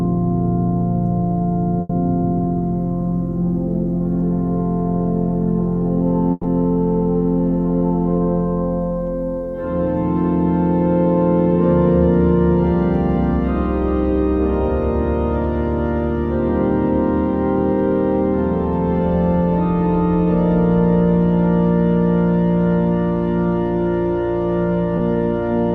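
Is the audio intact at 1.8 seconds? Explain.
No. A burst of packet loss runs from about 1.81 to 1.91 s. Roughly 80 ms of audio never arrived in time, and the receiver filled the gap by stretching the last sound it had and fading it down, so a held buzz or a fading hiss replaces the real signal. Playback then resumes with that 80 ms missing. On a spectrogram the pattern freezes into flat, fading bands before an abrupt restart. The waveform shows repeating cycles shrinking, then a sudden jump.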